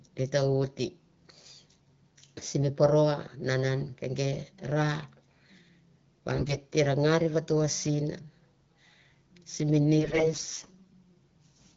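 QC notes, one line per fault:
6.34–6.61 s and 9.98–10.94 s, AMR bit errors: the sound turns hoarse, scratchy and gargly in two bursts, the first ending just before "te na ngar vato", while pitch and level roughly hold. Around one bit in ten of the less protected frame data arrives flipped, yet the check on the key bits passes, so the excitation pulses land misplaced and the fine pitch, gain and spectral values go wrong inside the AMR wideband 12.65 kbit/s stream.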